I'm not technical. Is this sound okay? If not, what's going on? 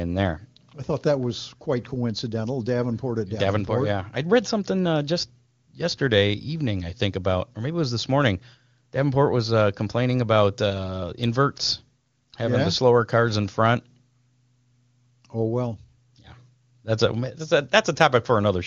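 Yes, no faults heard.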